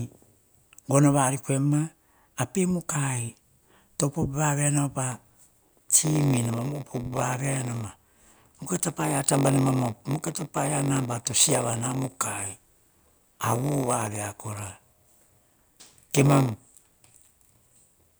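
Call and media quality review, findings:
Block size mismatch (padded), 5.11 s to end. Steady 93.8 Hz buzz over the speech. Speech runs slow at 0.938x, pitch about normal. The upstream stage writes short blocks into reads that fit a 512-sample buffer. The rest of each block is zero-filled, leaving a gap every block.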